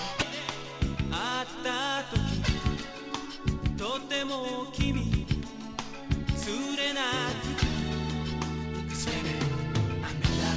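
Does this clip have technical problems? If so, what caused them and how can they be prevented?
No, this clip has no technical problems, so there is nothing to trace or prevent.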